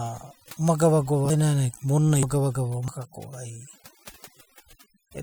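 Overdone noise removal runs throughout this speech: the noise reduction stage is set far too strong and pushes single frequency bands down or out whenever they sit near its noise estimate. Quiet parts of the voice go with them, so the background drops and breaks up into twinkling specks.

At 1.3 s, 2.23 s and 2.88 s, the capture likely failed to collect its samples before the hardware overwrote them, a dropped buffer (overrun) each time. About a tenth of a second, then about a fifth, then about a tenth goes missing. The two sides join directly with no silence, so at each spot the sound jumps ahead.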